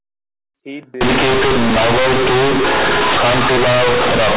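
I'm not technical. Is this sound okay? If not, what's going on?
No. From 1.01 s to the end, the speech turns into loud, harsh buzzing with heavy noise even in pauses. That is companded audio read as linear: telephone-coded sound played back without being decoded. Unlike simple overload distortion, quiet moments become as loud and rough as speech. Before that point, the narrow telephone sound is normal.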